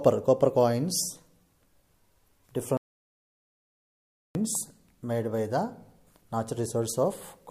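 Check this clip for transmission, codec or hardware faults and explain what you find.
One fault stands out: a playback stall. At 2.77 s the sound stops in mid-flow and the output falls completely silent for about 1.58 s. It picks up again at 4.35 s. The likely cause is the player running out of buffered data, or its thread being blocked, so nothing reached the output until it recovered. The gap is clean silence rather than noise. It sounds like a sudden freeze, then a resumption.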